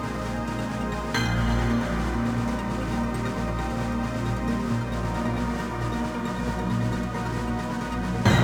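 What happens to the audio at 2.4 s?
A crude rate conversion is at work at 2.4 s, as it is across the whole clip. The sample rate was raised without any filtering, simply by repeating the nearest sample, which fits a 44.1 kHz to 48 kHz change where roughly one sample in every eleven is doubled. That regular stutter adds inharmonic tones about 30 dB below the sound, heard as a gritty fizz riding on its louder and brighter parts.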